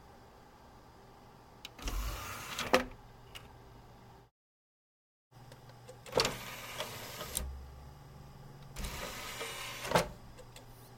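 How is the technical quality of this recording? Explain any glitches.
A steady ticking runs through most of the recording: a click or pop roughly every 0.77 s, about fifteen in all, from 0.59 s to 10.61 s. The regular spacing points to clock drift buffer slips. Two devices in the chain are likely running on separate clocks that disagree by a couple of hundred parts per million. The buffer between them gradually drifts until a handful of samples are dropped or repeated, and each of those jumps in the waveform is heard as a click.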